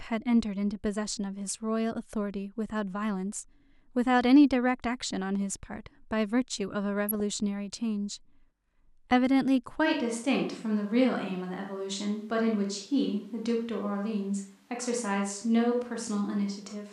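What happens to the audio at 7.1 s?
A brief burst of noise blips from 7.09 to 7.20 s: DAB burbling, where bit errors slipped past error correction and put short blips of noise into individual sub-bands.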